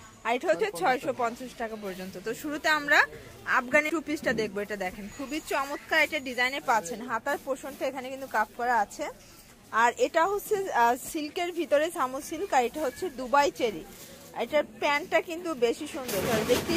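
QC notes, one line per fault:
0.59, 3.88, 11.93 and 16.24 s: compressed frames skipped. The sound jumps ahead by roughly 70, 100, 20 and 100 ms, consistent with one to several whole frames missing.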